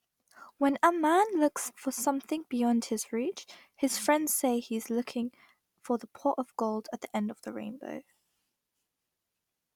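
Speech recording; no technical faults audible anywhere in it.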